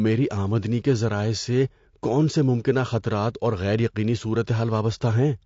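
From start to finish, the speech has likely been through low-delay AAC compression (AAC-ELD) at a rate consistent with about 32 kbps. At that low bitrate it quantizes coarsely, so the speech sounds plainly rough and grainy, with noise filling the gaps between harmonics.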